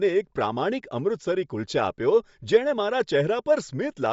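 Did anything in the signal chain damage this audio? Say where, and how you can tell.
Yes, at the codec stage: the speech carries Bluetooth LC3 compression throughout. Nothing sits above 7.7 kHz, and the upper band has a breathy, grainy texture. Likely LC3 at a bitrate near 32 kbps, with 10 ms frames, discarding high-frequency detail and filling it with noise.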